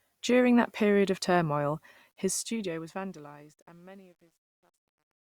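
From 2.12 s, as the speech fades out from around 2 s, truncation distortion on a fade appears. The gain stage keeps only 10 bits and adds no dither, so from 3.21 to 5.29 s the tail turns gritty. The waveform shows square staircase steps, and the spectrogram shows broadband hash.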